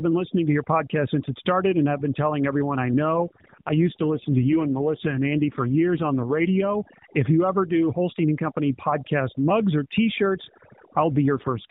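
Overdone noise removal runs through the whole speech recording: heavy gating of noise-like bands leaves near-silent gaps flecked with twinkling specks, present even where the bitrate holds.

From 3.05 to 6.71 s, right after "been telling everyone I", an AMR rate drop makes the voice rougher and more synthetic without any gap or narrowing of the band. The change fits a step from 12.2 to 5.9 kbps, which sets it apart from the steady denoising damage. The same rate drop returns from 11.14 s to the end, again briefly coarsening the narrowband mobile speech, which otherwise carries only light AMR codec colouring.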